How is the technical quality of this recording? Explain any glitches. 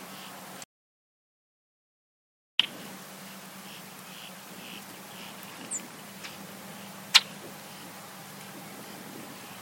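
The recording has one clear glitch, an audio dropout to silence. From 0.64 s to 2.59 s the sound cuts out abruptly and the signal falls to silence for about 1.95 s before resuming mid-flow. The gap holds no room tone or noise floor at all, only flat silence. That points to the input being lost upstream, likely through a disconnected device, failed link or accidental mute, while the recorder kept writing empty samples. Whatever occurred during that stretch is unrecoverable.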